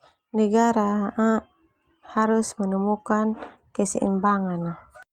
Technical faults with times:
none

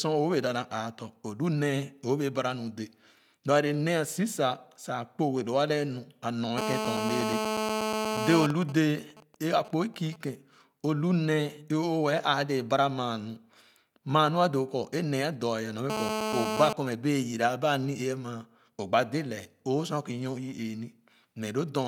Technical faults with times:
6.58-8.47 GSM phone buzz
8.50-10.16 GSM signalling bursts
15.90-16.73 GSM phone buzz

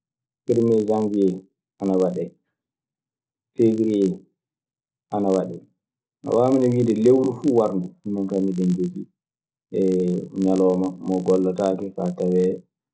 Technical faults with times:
0.00-12.94 resampler restarted on every block

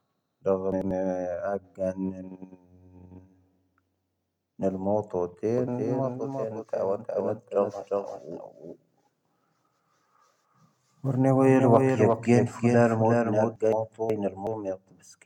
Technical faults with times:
0.72-0.91 frames out of order
5.58-13.56 doubled audio track
13.72-14.47 frames out of order

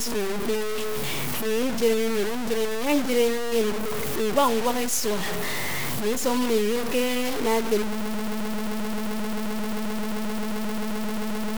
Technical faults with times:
0.00-11.58 low bit depth without dither
8.01-11.58 broken-record loop

